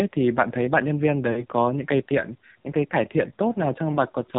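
Speech carried over a heavily compressed AMR narrowband mobile codec throughout: nothing above 4 kHz survives, and the voice has a buzzy, synthetic edge that fits one of the lowest AMR-NB modes, around 5.9 kbps. Plain band-limiting would only sound muffled. Here the vocal tract model, driven by too few pulses, rebuilds the voice roughly, so the buzz reveals the codec rather than a filter. There are also lost AMR speech frames. From 1.32 to 1.45 s, between "thấy bạn nhân viên" and "có những cây tiện", the sound smears and weakens, which fits two frames (about 40 ms) failing and being concealed. At 3.92 to 3.98 s a shorter dip fits a single lost 20 ms frame. Unlike a hard dropout, there is no clean silent gap: the decoder reuses the last good pitch and vocal tract settings at falling gain, so the previous sound stretches and fades before the voice returns rough for a moment.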